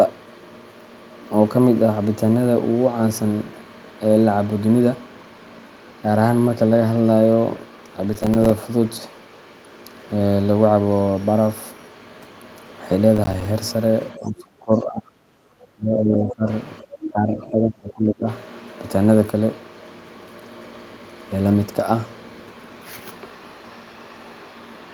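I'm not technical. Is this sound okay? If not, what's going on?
No. There are three separate problems.

From 8.14 to 8.51 seconds and again from 13.16 to 13.45 seconds, you hear processor overload crackle: a short gritty tearing laid over the speech. The computer was too busy to deliver sound on schedule, so it dropped a quick run of tiny slices, each lasting only a few milliseconds and each replaced by silence. Unlike a single dropout, this is many small gaps in a row, so it sounds like crackle rather than one clean break.

From 14.13 to 15.35, 15.58 to 16.48 and 17.07 to 18.28 seconds, the voice sinks sharply, sounds duller or breaks into pieces for roughly a second at a time. This is speech suppressed in double talk. The likely cause is that the other person spoke at the same moment, and the echo-cancelling software turned the talker down along with what it took for echo. The talker's own voice is pushed down here. 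No extra voice is added.

Right at 17.04 to 17.09 seconds, just as the last dip starts, there is a brief, quieter scrap of a different voice. This is the other side's voice leaking through. It most likely comes from the other person's voice playing on the talker's loudspeaker and getting back into the microphone. Here a second voice is added to the sound, while in the dips the talker's own voice is reduced.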